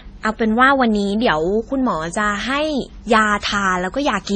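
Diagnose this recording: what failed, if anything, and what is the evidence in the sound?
Transcoding between lossy codecs, heard across the whole speech clip, at the codec stage. Nothing sounds above 9 kHz, and the first coder's artefacts are heard together with a second coder's own: likely a 32 kbit/s MP3 re-encoded as AAC-LC, each pass adding damage.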